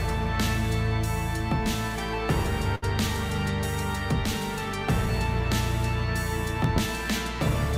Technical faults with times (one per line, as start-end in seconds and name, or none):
2.75-2.84 short stall from a late packet
6.64-6.80 loud pop